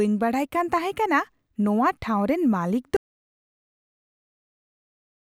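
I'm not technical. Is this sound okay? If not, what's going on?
No. At about 2.97 s the speech cuts off into dead silence that lasts to the end, an audio dropout to silence, likely from the input being lost mid-recording.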